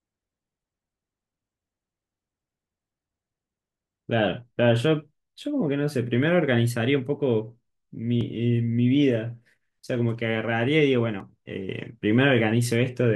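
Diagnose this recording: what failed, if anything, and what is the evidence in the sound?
Audio missing between chunks, likely from buffered capture losing a few milliseconds per 3 s block, heard as butt-joined skips at 8.21 and 11.20 s.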